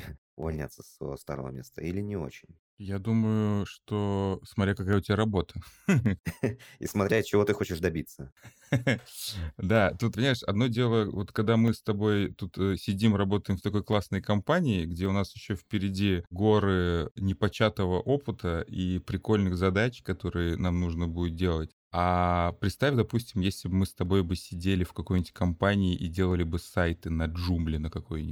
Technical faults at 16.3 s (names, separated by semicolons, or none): clock drift buffer slips